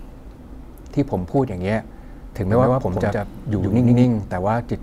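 A speech clip with a doubled audio track from 2.50 s to 4.04 s. Over that span a second, full-band copy of the speech runs roughly a tenth of a second behind the original at about the same level, giving a flat, slapback-like repeat with no decay or room colour. The copy switches in and out abruptly at both ends. The likely cause is the signal being captured twice, once through a slower path, or two offset copies left in an edit.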